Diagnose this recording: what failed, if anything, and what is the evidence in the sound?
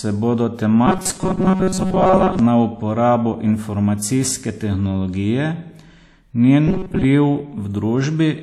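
Robotic sound from repeated short buffers at 0.87–2.39 s and 6.67–7.05 s: a rigid 188 Hz buzz, likely driver-stage repeats of about 5.3 ms.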